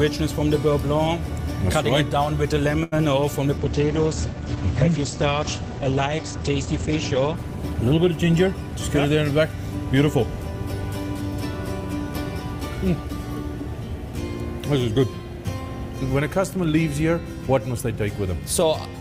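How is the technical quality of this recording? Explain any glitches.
The recording has four network-related glitches, all within the first ten seconds: two brief packet problems near 3 s, then a long stretch of reduced quality that overlaps a short speed-up.

A short stall from a late packet occurs from 2.83 to 2.94 s. A packet missed its deadline and the jitter buffer ran dry, so the receiver stretched the last sound for 85 ms until it arrived, then resumed. Nothing is lost, but the sound holds too long with a buzz or dip, and the delay grows by 85 ms.

Short concealed packet loss follows at 2.98 to 3.01 s. About 20 ms of audio never reached the decoder in time, and the receiver covered the gap by extending the preceding sound before blending back. It comes across as a brief smear or wobble.

A call bitrate drop runs from 3.58 to 9.23 s. A lower bandwidth estimate pushed the encoder from 48 to 12 kbps, bottoming out for 3.37 s, and the audio band narrowed from 20 kHz to 8 kHz. 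The sound turns coarse and muffled, then clears once the rate recovers.

A jitter buffer speed-up spans 8.47 to 9.53 s. Holding excess audio, the receiver removed short pitch-period pieces repeatedly, about 70 ms in total, to reduce delay. Playback runs at 105% speed with unchanged pitch, giving a slightly hurried feel.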